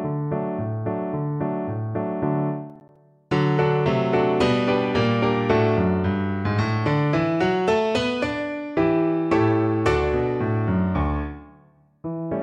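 Processor overload crackle runs from 2.70 to 2.96 s. The processor failed to finish its audio buffers in time, and a handful of deadlines slipped in a row, pointing to buffers of around 10 ms. Each miss left a short silent gap with hard edges, heard as a quick gritty burst of crackle.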